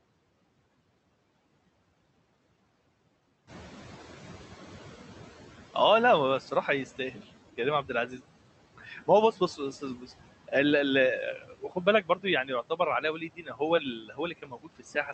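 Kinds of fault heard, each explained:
Noise suppressor artifacts: The suppressor works frame by frame, pulling down whatever bands it reckons are steady noise, by about 17 dB here. You can hear the background sink in the gaps between words and then come back up underneath the speech whenever someone's talking, so the noise floor keeps breathing along with the voice rather than sitting still. That pumping is the giveaway, and it runs the whole length of the clip.
Noise suppressor catching up: Around 3.5 s the room noise jumps by about 10 dB, and the suppressor's noise estimate doesn't keep pace. From 3.47 to 5.59 s, a bit over two seconds, the louder background leaks through with less reduction than before, then gradually sinks as the estimate adapts and settles at roughly 12 dB of cut. It sounds like the noise swells suddenly and then fades away again.
Speech cut by the noise suppressor: Here the suppressor mistakes bits of the speech for noise and turns them down with the background, so soft sounds and word endings come out swallowed or faint. 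It happens at 7.57–8.19 s and 8.78–10.1 s, with drops of about 10 dB on short bits of about 100 to 150 ms. It gets worse at 11.36–13.61 s, where well over half a second is hit by about 15 dB, and again from 13.99 s to the end.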